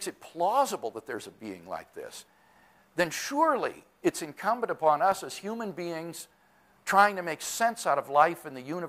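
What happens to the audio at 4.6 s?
Nothing goes wrong at 4.6 s; the audio carries on intact through that moment, with no dropout, click or other fault to be heard.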